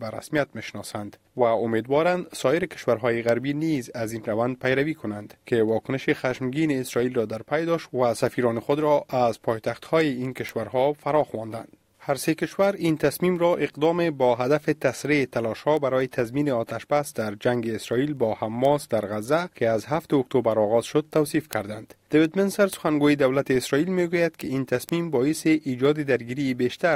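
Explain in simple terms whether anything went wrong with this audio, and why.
Word clock ticks run through nearly the whole clip, from 0.17 s to 26.81 s: small, sharp clicks roughly every fifth of a second, some louder than others. They come from two digital devices passing audio between them while each keeps its own time. The two clocks disagree slightly, on the order of 100 parts per million, and every time they drift a step apart, a single sample gets dropped or doubled, which you hear as a tick.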